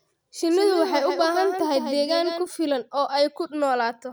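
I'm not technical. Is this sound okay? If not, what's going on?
No. A doubled audio track runs from 0.51 to 2.47 s, ending just before "filan oo": a second, somewhat quieter copy of the speech trails about a sixth of a second behind, likely from the sound being recorded twice along a slower path, and it cuts off abruptly.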